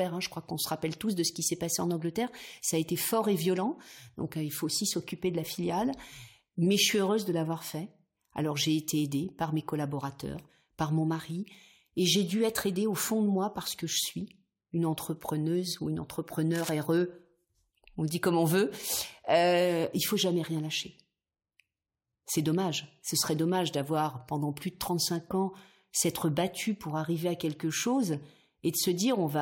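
A worn cable or connector likely shifted at 16.54 to 16.70 s, just after "une entrepreneuse ou une", adding a cable scratch noise burst of rough crackle about 10 dB below the speech.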